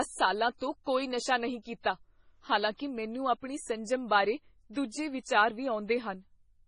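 Throughout the speech, the treble stops abruptly at about 10.6 kHz, and the sound has a heavy watery, swirling texture with smeared attacks. This is likely MP3 compression at a very low bitrate, around 24 kbps. Starved of bits, the encoder discards everything above a fixed cut-off and zeroes weaker frequency lines. Those lines flicker on and off from frame to frame, producing the swirl.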